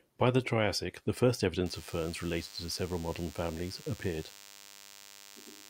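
A speech clip carrying DECT cordless phone buzz from 1.66 s to the end. A nearby DECT handset or base transmits a short radio burst every 10 ms, and the audio circuitry rectifies it into a thin, steady 100 Hz buzz with many harmonics, sitting about 20 dB below the speech. Unlike mains hum at 50 or 60 Hz, which sounds smooth and low, this buzz is harsh and edgy.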